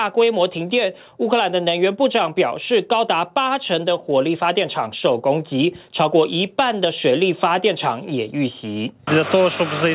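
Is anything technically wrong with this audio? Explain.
No, nothing here is actually wrong: the audio just sounds like a normal phone call, with a narrow band topping out around 4 kHz and the light coding grain you'd expect from a 64 kbps G.711 mu-law connection.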